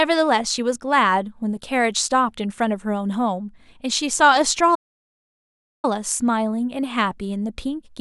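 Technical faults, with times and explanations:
4.74 to 5.85 s, playback stall: the speech stops mid-flow and the output goes completely silent for 1.09 s, likely because the player ran out of data or its thread was blocked. The waveform drops to a flat line, and the spectrogram shows a blank vertical band across all frequencies.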